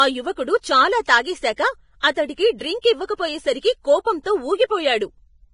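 Throughout the speech, the treble is grainy and hissy below a hard ceiling near 10.5 kHz, with blurred consonant attacks, likely heavy Vorbis compression at a low bitrate, around 27 kbps.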